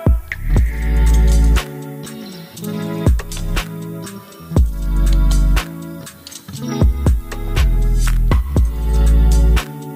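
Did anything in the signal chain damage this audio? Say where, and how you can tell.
Yes: low bit depth with noise shaping runs through the whole clip, introduced at sample-format conversion. A steady, thin hiss sits roughly 30 dB below the sound and climbs sharply toward the top of the band. Requantising to 8 bits with error feedback pushes the rounding noise into the highest frequencies.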